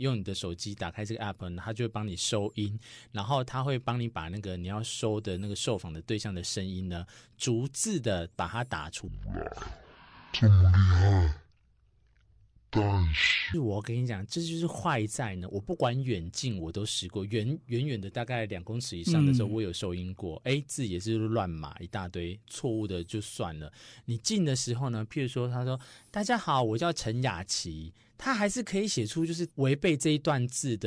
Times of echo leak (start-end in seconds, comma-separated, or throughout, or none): none